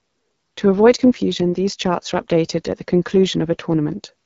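Throughout, the speech sounds rough and raspy with nothing above 7.4 kHz, typical of the AMR wideband (HD Voice) codec at a low rate, which fits 8.85 kbit/s.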